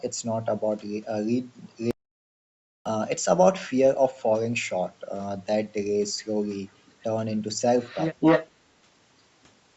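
From 1.91 s to 2.86 s the speech stops dead in an audio dropout to silence. For about 0.95 s the signal is silent, with no room tone or noise floor underneath, and then the speech resumes mid-flow. Whatever was said in that window is lost. The hard edges and total absence of background point to the input being lost while the recorder kept writing samples, likely a momentary disconnect or mute upstream.

Later the clip shows echo leak, with a delayed copy of the speech arriving 242 ms behind the original. The first trace is a brief, very faint fragment between 6.86 s and 6.92 s, well below the direct speech. From 7.8 s to 8.5 s the leak is far stronger, louder than the speech itself. This is likely a far-end loudspeaker whose echo canceller failed to remove its own playback, which its microphone then sent back. The echo sits within the call's band-limited audio, which carries nothing above 8 kHz.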